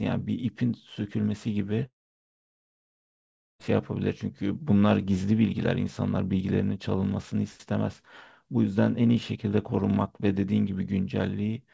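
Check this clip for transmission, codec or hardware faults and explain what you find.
One real fault in this speech clip, a long network dropout, with the audio carried over what sounds like a G.722 call path, so nothing reaches above 8 kHz.

From 1.86 to 3.61 s the sound cuts out for about 1.7 s. Right at the break the receiver stretches the last bit of sound into a short fading buzz, then it's near silence until the audio picks up again further along. That pattern points to a likely network dropout: packets stopped arriving, concealment filled the gap briefly and gave up, and roughly 1.7 s of the original is simply gone.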